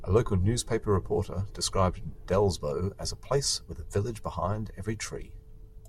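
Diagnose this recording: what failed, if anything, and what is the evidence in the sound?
The likely failure is at the converter stage: two devices running on independent clocks with no synchronisation, drifting apart by roughly 0.1 percent. Each time the offset adds up to a whole sample, one sample is dropped or repeated. These clock slip clicks run through the speech from 0.12 s to 5.87 s, about every 20 ms. At that rate the single-sample slips merge into a faint, steady rattle on louder sustained sounds.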